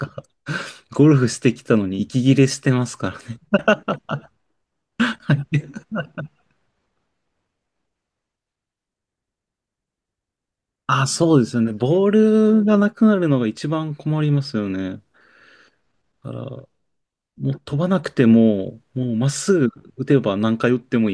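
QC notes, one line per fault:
No faults came through on this one; it's a straightforward speech clip with nothing that needs flagging.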